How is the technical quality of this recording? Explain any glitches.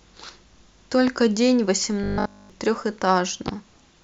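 The recording has three glitches: two loud pops and one stretch of robotic sound from repeated short buffers.

The loud pops occur at 1.08 to 1.11 s and again at 3.48 to 3.51 s, each a single burst about 10 dB above the speech. They are likely caused by a sudden voltage step or pulse, from a plug, switch, static or driver glitch, added to the signal. Each is heard as a sharp thump over the speech, which continues underneath. On a waveform each shows as a narrow spike towering over the speech envelope, and on a spectrogram as a thin vertical stripe spanning the whole frequency range.

From 2.04 to 2.50 s the speech becomes robotic, with a rigid, metallic buzz pitched at 50 Hz. The likely cause is audio arriving too seldom, so the playback software keeps repeating the last 20 ms of audio (one over 50 Hz) while the real audio is skipped. The whole stretch consists of these repeats. On a spectrogram this shows as evenly spaced horizontal harmonics at multiples of 50 Hz, replacing the natural moving speech pattern. 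The waveform shows an identical short cycle copied again and again.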